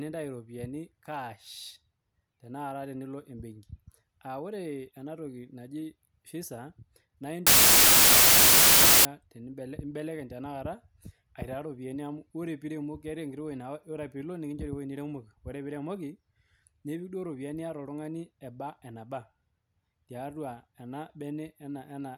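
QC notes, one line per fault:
7.47–9.05 s wrong sample width: loud noise with the speech buried inside, 1.33 times fast and high, which fits packed 24-bit samples read as 32-bit.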